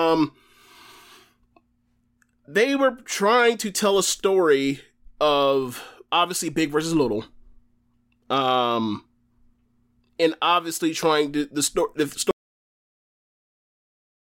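At 12.31 s the speech just stops dead and never comes back: it's an audio dropout to silence running right through to the end at 14.38 s, roughly two seconds of silence. There's no room tone or hiss under it, so the capture chain itself went quiet, likely a lost input or an accidental mute while the recorder kept writing. Whatever was being said after that point is simply gone.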